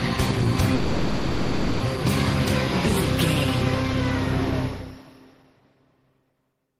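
From 0.74 to 1.82 s there is a call audio freeze: the last sound stretches into a fading, smeared fill for about 1.06 s, then the audio resumes where it stopped. Nothing is lost, but everything after lands later, likely from delayed packets emptying the jitter buffer. A spectrogram shows frozen horizontal bands; the waveform shows a smooth decaying envelope.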